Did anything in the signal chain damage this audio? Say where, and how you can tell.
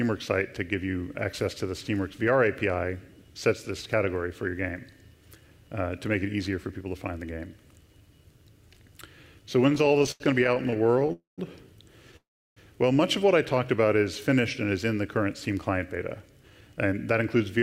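Yes. The network path disturbed it. From 9.69 to 11.11 s there are repeated stalls (stutter): 28 short gaps, the longest 87 ms, filling about 355 ms, a quarter of that span. Packets arrived late again and again. The jitter buffer kept running dry, and the receiver stretched the last sound each time.

Two call audio freezes follow, at 11.13 to 11.40 s and 12.16 to 12.58 s. They last 248 ms and 400 ms. Each held sound fades, with 140 ms and 340 ms of silence. The likely cause is packets held up in transit. The audio resumes where it stopped, now delayed.

From 15.50 to 17.58 s a jitter buffer speed-up runs the audio at 108% speed without changing pitch. It sounds hurried. The buffer held more audio than it aims for. The receiver trimmed out roughly 0.2 s in many tiny pitch-period cuts to catch up.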